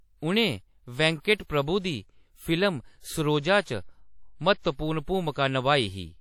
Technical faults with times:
0.00-6.20 WMA compression
1.20-1.25 pre-echo

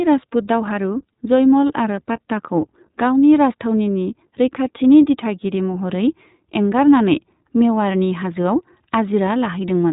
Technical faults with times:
0.00-9.92 iLBC codec

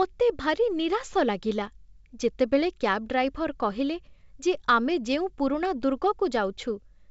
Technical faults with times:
none

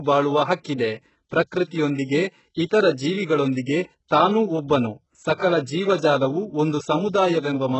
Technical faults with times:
0.00-7.79 HE-AAC compression

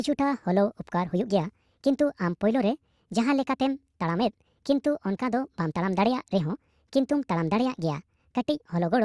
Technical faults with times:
0.00-9.05 wrong sample rate

